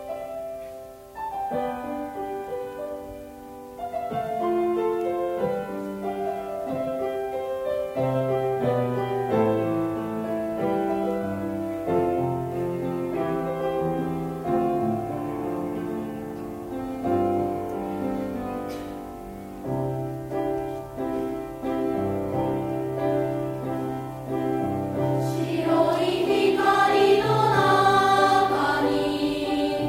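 No technical faults can be heard anywhere in this recording.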